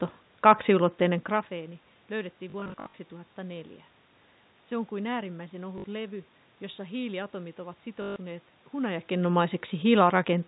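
Packet loss with the last packet repeated shows up at 2.5–2.94 s, 5.78–5.84 s and 8.02–8.16 s. Each gap is filled by looping the previous chunk, giving a robotic 50 Hz buzz that fits 20 ms packets.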